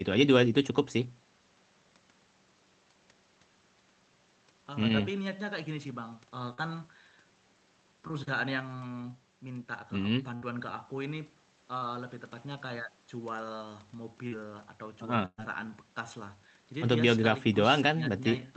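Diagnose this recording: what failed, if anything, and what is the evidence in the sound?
The network dropped packets on the call, and the receiver concealed the short gaps. These are short concealed packet losses: at 6.53 to 6.59 s about 40 ms was missing, at 8.07 to 8.11 s about 20 ms, and at 14.27 to 14.33 s about 40 ms. In each gap the decoder extended the preceding sound from its last pitch or as shaped noise, then cross-faded back into the received speech. Each one is heard as a brief smear or wobble in the speech.

The network also lost longer runs, which are bursts of packet loss. About 60 ms is gone at 10.35 to 10.43 s, and about 120 ms at 15.25 to 15.40 s. The receiver continued the last sound and attenuated it as each gap lengthened, giving a held buzz or a fading hiss. In the longer burst the concealment fades to full silence for its last 50 ms or so. When the speech resumes, the audio that fell in each gap is missing. 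Throughout, the Opus call path band-limits the speech at 8 kHz.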